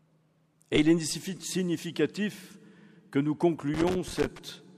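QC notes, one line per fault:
3.74–4.39 s, loose connector crackle: a worn or dirty contact in the signal path keeps making and breaking for about 0.65 s, chopping the audio into fragments, so it comes across as an irregular, scratchy burst.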